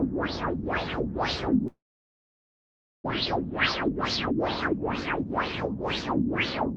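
From 1.67 to 3.12 s the sound collapses into a brief fading buzz, then about 1.3 s of near-silence, most likely a long network dropout. Unlike a short packet loss gap, about a second of material never returns. From 3.83 to 4.74 s a jitter buffer speed-up plays the sound at about 121% speed with pitch unchanged, trimming roughly a fifth of a second so it sounds hurried rather than higher.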